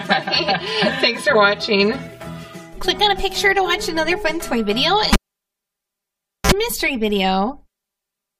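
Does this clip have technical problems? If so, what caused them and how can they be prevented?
Yes. Throughout the clip one channel arrives about 5 ms behind the other, and when the two are summed to mono the channel delay causes comb filtering. Content shared by both channels cancels at regularly spaced frequencies, starting near 100 Hz and repeating at odd multiples of it, so the audio sounds hollow and phasey, with a fixed notched coloration. To prevent it, check inter-channel timing and mono compatibility before summing, and align any late channel.

Between 5.13 s and 6.52 s a live cable is pulled and plugged back in. A pop marks the break, then the signal drops to near silence for about 1.34 s. As the plug goes back in, a burst of 60 Hz mains buzz lasting about 49 ms comes through while only the tip makes contact, followed by a second pop as the sound returns. To prevent this, mute or lower the channel before touching any connection, and secure cables so they cannot be disturbed during recording.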